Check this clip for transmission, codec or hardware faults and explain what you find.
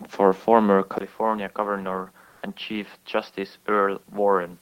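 Two faults are audible in this speech clip.

From 0.98 s to the end, after a 20 ms gap, the sound turns duller and about 5 dB quieter, with nothing above 5.7 kHz. This likely comes from the input switching to a poorer, narrower-band device.

From 2.29 to 2.41 s, the room background, sitting about 41 dB below the speech, gives way for 120 ms to a steady, featureless hiss about 4 dB louder. This is likely comfort noise, which fits Opus DTX filling a pause.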